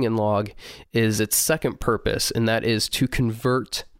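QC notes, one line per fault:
1.82 s, electrical switching spike. A single sharp snap cuts through the speech at this point. It sits on top of the voice rather than replacing it, and it peaks at about -10 dBFS. The click is over almost instantly. The likely cause is a nearby switch, motor or static discharge throwing a brief arc that the audio line picked up as an impulse.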